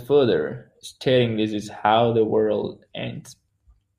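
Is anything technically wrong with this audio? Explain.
No, nothing technically wrong can be heard in this speech recording. No fault turns up anywhere in the audio.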